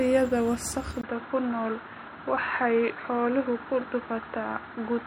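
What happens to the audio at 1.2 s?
At 1.2 s the sound is already past an input switched to a poorer device, which happens at 1.01 s and lasts to the end of the clip at 5.07 s. A gap of about 20 ms marks the change, most likely a move to another microphone or a headset's call profile. From there nothing comes through above 4.1 kHz, so the speech turns dull and boxy. New background noise sits about 35 dB under the signal, and the loudness stays about the same.

MP3 compression is also audible here, as it is for the whole clip. The watery, swirling texture and the smeared consonant attacks point to a low bitrate of about 64 kbps. At that rate the encoder drops weak frequency lines that then flicker on and off from frame to frame. Its own treble limit sits at 20.7 kHz, well above the narrower band left by the device change.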